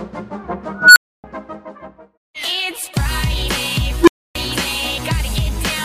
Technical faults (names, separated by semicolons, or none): unstable filter